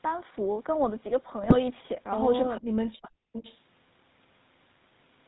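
Speech passed through the GSM full-rate codec throughout, plainly audible as buzzy, gravelly roughness with nothing above 4 kHz, consistent with 13 kbps GSM coding. Between 1.43 and 1.55 s, GSM bit errors corrupted the decoder's parameters across what sounds like about six frames, producing squawks, pops and gargling. From 2.59 to 3.35 s, speech suppressed in double talk, likely from an echo canceller turning down both talkers, makes the voice dip by roughly 40 dB and break up for most of that stretch. An echo leak, likely from a loudspeaker whose canceller let part of the signal through, follows from 3.33 to 3.59 s as a delayed copy about 442 ms late and roughly 10 dB below the speech.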